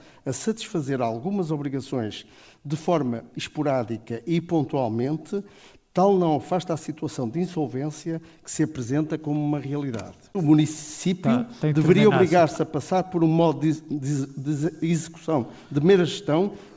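No technical faults can be heard, and the call path's G.722 codec simply leaves nothing above 8 kHz.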